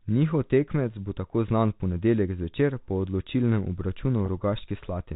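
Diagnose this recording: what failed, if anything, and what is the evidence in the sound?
Network stage: a 20 ms gap at 4.26 to 4.28 s, likely one lost packet, patched by packet loss with pitch repetition, so the speech holds with a buzzy tone.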